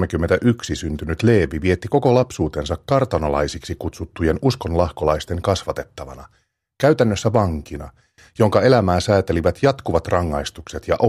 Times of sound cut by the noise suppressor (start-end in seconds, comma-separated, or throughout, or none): none